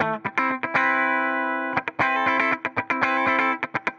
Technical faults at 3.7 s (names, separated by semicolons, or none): none